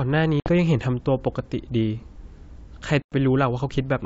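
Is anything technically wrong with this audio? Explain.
Yes. Packet loss on an ADPCM call occurs at 0.40 to 0.50 s, about 60 ms lost, and at 3.02 to 3.13 s, about 100 ms, roughly five packets. Silence fills each hole abruptly. The decoder's predictor and step size then mismatch the sender's, so speech resumes with a click, distortion or a wrong level before settling.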